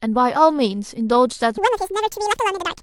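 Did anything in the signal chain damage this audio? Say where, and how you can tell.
Yes. From 1.58 s to the clip's end at 2.82 s, the speech is audio read two samples at a time (double speed), a sample-format conversion fault. Each sample pair is taken as one frame, so playback runs 2x fast and 12 semitones higher. A spectrogram shows harmonics shifted up an octave and compressed syllables.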